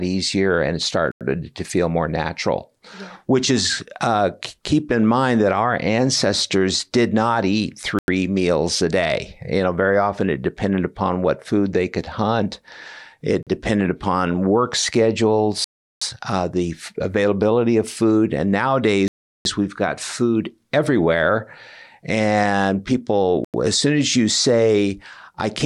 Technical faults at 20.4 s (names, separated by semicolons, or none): none